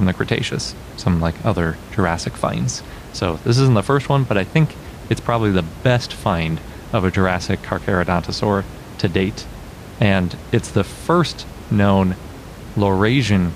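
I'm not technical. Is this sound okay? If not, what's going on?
Yes, this sound is okay, and the background noise you may notice is just the room the microphone was in, not a problem with the recording.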